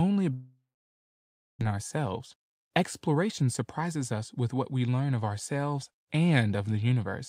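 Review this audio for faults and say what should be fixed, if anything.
Long network dropout, 0.33 to 1.63 s: the sound stops, the last fragment trails briefly, then about a second of silence follows, likely from a long packet outage. Audio resumes without the lost part. To prevent it, improve network reliability or add redundancy such as forward error correction.

Jitter buffer speed-up, 1.70 to 4.37 s: the receiver trims tiny pitch-period slices repeatedly, running the sound at 109% speed with unchanged pitch and shedding around 0.3 s of backlog. To prevent it, size the jitter buffer to absorb delivery bursts so it doesn't overfill after delays.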